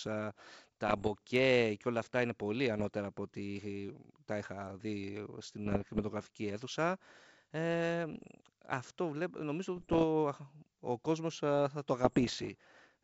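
Bit errors on an ADPCM link break into the speech in six bursts: 0.88–1.11 s, 2.77–2.88 s after "όλα αυτά είναι πολύ", 5.66–6.03 s, 8.13–8.31 s, 9.76–10.05 s after "αυτό νομίζω", and 12.05–12.50 s after "ο κόσμος θα το". Error rates of about 0.5 to 1 percent throw the decoder's step size and predictor off track, so each burst is heard as pops and gritty roughness with brief level jumps. On a spectrogram they show as broadband vertical streaks, and on the waveform as spiky, uneven envelope jumps, all within the G.722 band that reaches to 7 kHz.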